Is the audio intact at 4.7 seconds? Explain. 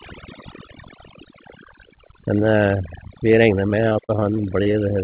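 No. At 4.7 s the clip is near the end of a stretch of repeated packet loss (robotic sound) running from 3.32 to 4.75 s. Packets kept failing to arrive in time, and each hole was bridged by extending the sound just before it. About a dozen short holes follow one another, the longest about 36 ms, and roughly 14% of the stretch is patched. The result is choppy, with pieces of the speech dropping out.

Overdone noise removal also affects this moment, as it does the whole clip. A noise suppressor set far too aggressively pulls individual frequency bands down or out wherever they sit close to its noise estimate, and the quieter parts of the speech are removed along with the noise. The background drops and breaks up into twinkling specks. This sits on top of the telephone-band sound of the call path, which has nothing above 4 kHz.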